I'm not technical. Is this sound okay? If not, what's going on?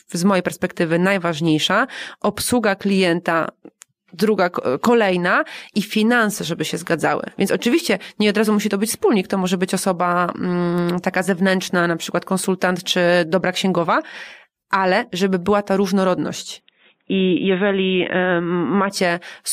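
No. From 16.6 to 18.9 s, just after "żeby była ta różnorodność", the voice suddenly turns dull and boxy, as if heard through a phone. The sound gets narrower, so the crisp top end disappears. Loudness stays the same, there's no gap at the changeover, and a very faint new background noise comes in. This is most likely an input switched to a poorer device: the recording moved to a lower-quality microphone or headset partway through.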